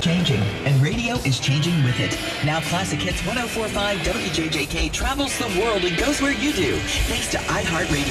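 The audio has no audible technical faults.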